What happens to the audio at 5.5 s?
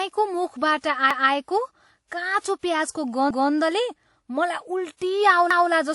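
From 5.51 to 5.71 s, a 200 ms piece of the speech plays twice. This is overlapping chunks: each new chunk began before the previous one ended, and the join fits 2 s chunks. It is heard as a brief stutter or click.

Under that repeat, the sound has the layered smear of transcoding between lossy codecs. It is likely a chain of MP3 and then WMA 1, at bitrates near 52 and 64 kbit/s. Nothing is present above 11.3 kHz, so the top end sounds dull.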